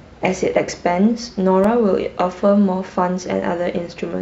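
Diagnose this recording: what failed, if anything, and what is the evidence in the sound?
The playback stage failed: a scratch or blemish on the disc wiped out more data than the player's error correction could reconstruct, once per revolution, so the player interpolated or muted the affected samples. These CD scratch ticks come as four short clicks in the speech between 1.18 s and 1.87 s, about six per second, each lasting under a millisecond. That steady spacing matches the disc's rotation carrying the damaged spot past the laser again and again.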